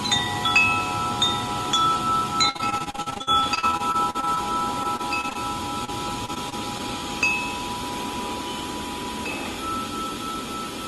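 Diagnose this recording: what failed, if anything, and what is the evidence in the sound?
Network stage, with the loss surfacing through the call decoder's concealment: repeated packet loss (robotic sound) runs from 2.49 to 5.37 s, with 29 gaps, the longest 54 ms, and about a quarter of that stretch synthesised rather than received. A shorter burst follows from 6.26 to 6.81 s, with 4 gaps up to 25 ms, about 13% concealed. Each hole is bridged by extending the last received sound, and the next hole arrives before the audio settles, giving the choppy, robotic texture.

A single short concealed packet loss sits at 5.85–5.90 s, also a network fault handled at the decoder. About 20 ms of audio failed to arrive in time, and the receiver patched roughly 29 ms by continuing the preceding sound, from its pitch if voiced or as shaped noise if not, then crossfading back into the real signal. The result is a brief smear or wobble, and a very short sound in that window can be lost outright.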